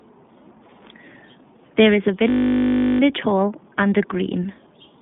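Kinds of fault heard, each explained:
iLBC codec: the whole speech clip passes through this narrowband VoIP coder, which treats each 20 ms frame independently. Nothing above about 3.8 kHz survives, and the coding damage is plainly audible as a rough, slightly synthetic edge, consistent with roughly 15 kbps operation.
System hang loop: from 2.3 to 3.0 s, after "is a" and before "hall and a green", the output froze on one 20 ms slice of buffer and replayed it about 35 times. At a 50 Hz repeat rate this sounds like a steady buzz.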